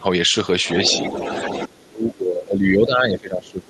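At the very start, from 0 to 0.04 s, the speech ducks sharply, about 15 dB down for roughly 40 ms. This is speech suppressed in double talk, likely an echo canceller that could not tell the local talker from loudspeaker echo while both sides were active and so pulled everything down.

From 0.64 to 1.68 s a second, fainter voice sits under the talker, roughly 10 dB below the main speech. This is the other side's voice leaking through. The far end's audio, played on the talker's loudspeaker, was likely not fully cancelled from the microphone signal.

From 1.67 s to the end, the talker is suppressed in double talk again, far more heavily this time. The level sinks by as much as about 30 dB, probably because the canceller again treated overlapping talk as echo.

A last brief scrap of the other side's voice leaks through from 3.47 to 3.51 s, very faint at about 35 dB below the speech, likely residual echo slipping past the canceller. 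Across the clip the call codec's coding noise and a top end that stops near 12 kHz fit an Opus stream at around 32 kbps.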